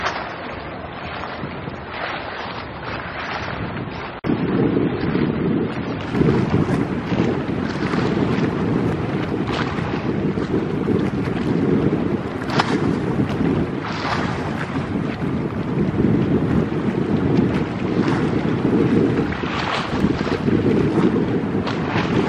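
From the start to 6.0 s the audio shows an adaptive stream starting at a low bitrate: the treble is missing or sounds synthetic and codec artefacts are stronger, which fits a version near 24 kbit/s. At 6.0 s the quality steps up abruptly to one consistent with about 96 kbit/s. The switch happens with no gap, silence or repeat, which sets it apart from a dropout or rebuffering stall, and the dull opening fixes itself rather than persisting.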